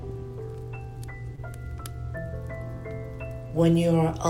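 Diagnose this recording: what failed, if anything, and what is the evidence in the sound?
The failure is in the network stage: a short concealed packet loss at about 1.35 to 1.39 s. Around 20 ms of audio did not arrive in time to be decoded, and the receiver synthesised 20 ms to fill the gap. It extended the preceding sound from its last pitch period, or from shaped noise where there was no pitch, then crossfaded back into the real signal. The result is a brief smear or wobble.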